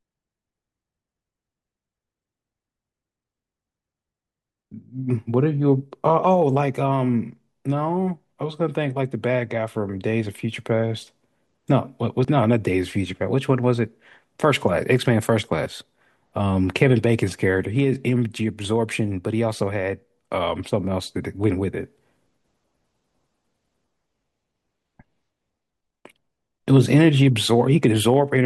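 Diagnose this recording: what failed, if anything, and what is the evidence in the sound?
At 12.25, 15.66 and 18.65 s the speech jumps ahead roughly 20 ms, likely a driver-stage dropped buffer (overrun), unread samples overwritten.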